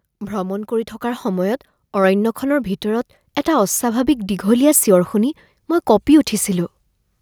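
A microphone volume stepped up fault occurs at 1.02 s, just after "ভ্ৰমণ কৰি". The call software judged the microphone too quiet and raised its input volume in a single step of about 4 dB, so the speech and the background noise both jump louder together.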